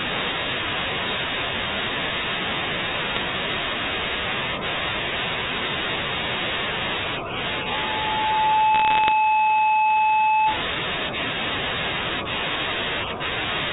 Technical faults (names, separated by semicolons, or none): bit errors on a digital phone line; loudspeaker feedback squeal